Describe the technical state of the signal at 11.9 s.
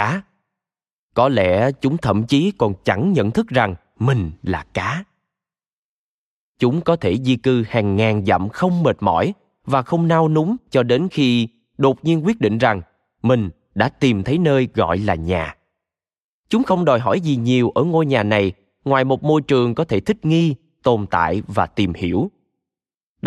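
At 11.9 s the speech signal is intact, with no audible fault at that moment.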